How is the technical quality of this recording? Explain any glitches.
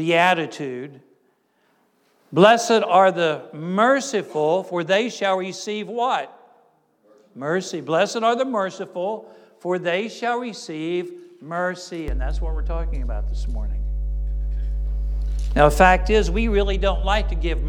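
Mains hum enters at 12.08 s and runs to the end at 17.68 s. A ground loop or a nearby transformer is leaking the 50 Hz power line into the signal, so a steady low tone sits under the sound, roughly as loud as the material itself. On a spectrogram it appears as a bright horizontal line at 50 Hz with fainter lines at its low harmonics. The waveform gains a regular 20 ms ripple riding under everything after 12.08 s.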